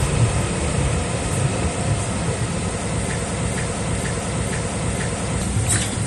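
Everyday sound recording, it has likely been passed through one lossy codec and then re-encoded with another, and the mix of artefacts points to a low-rate MP3 followed by Vorbis at a similarly low rate. This transcoding between lossy codecs leaves both sets of smearing and swirl layered together, with nothing above about 15.1 kHz throughout. From 3.19 to 5.42 s the playback or stream likely stalled and kept resending its last buffered fragment, producing a broken-record loop: a 476 ms piece repeats five times back to back, and whatever sound belonged in that stretch never arrives.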